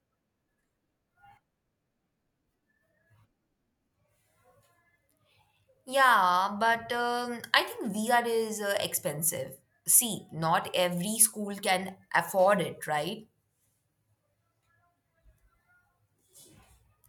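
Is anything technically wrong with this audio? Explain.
No, nothing technically wrong stood out on listening to this speech recording.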